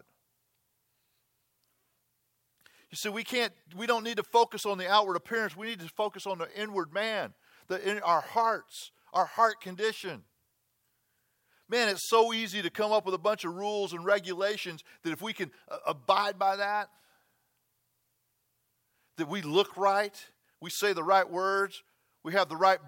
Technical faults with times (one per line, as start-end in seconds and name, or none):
none